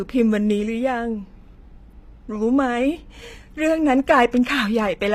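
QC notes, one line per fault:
throughout: HE-AAC compression, likely near 24 kbps. S sounds turn gritty and lispy because copied-up treble replaces the real highs, so the top stays bright instead of dulled.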